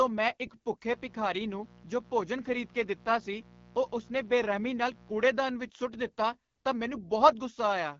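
From the first moment, the speech carries the mark of the AMR wideband (HD Voice) codec. The damage is plainly audible. The voice sounds rough and raspy. That grain points to one of the codec's lowest rates, which fits 8.85 kbit/s. At that rate the vocal tract model has too few bits to follow the voice closely. Nothing sits above 7.1 kHz. The top band is filled with shaped noise rather than real detail.

At 0.85 s a mains buzz enters. It runs until 5.24 s, then stops. It is built on 60 Hz. Sharp switching spikes, twice per mains cycle, throw harmonics far up the spectrum. The result is a steady, raspy buzz rather than a soft hum. It sits roughly 25 dB below the speech.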